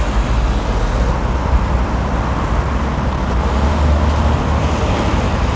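At 1.10 to 1.12 s there is a skip ahead. About a second of audio never reached playback, either lost in transit or discarded when the jitter buffer overflowed with later audio already queued. The receiver inserted nothing in its place, so the sound jumps straight from the moment before the cut to material roughly a second further on. The two edges butt together with no audible gap, and the sound simply leaps forward.

From 1.20 to 3.71 s comes a jitter buffer speed-up. The receiver was holding more audio than its target delay, and to drain the surplus it repeatedly removed tiny slices of one or a few pitch periods. Altogether it cut something like a third of a second. The sound plays at about 110 % speed for those two and a half seconds, hurried and compressed in time, while its pitch stays where it was.

All of this sits on a call path whose band stops at 8 kHz, which fits G.722 at 64 kbps.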